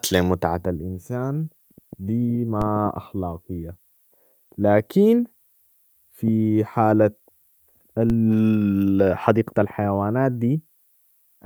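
At 2.62 s, just after "لمتعة الإنسان دي", and again at 8.10 s, a DC step jumps the waveform's zero line by about -16 dBFS, heard as a low thump. A 20 Hz high-pass then bleeds the offset away, showing as a sudden baseline shift that drifts back, with a brief broadband spectrogram stripe.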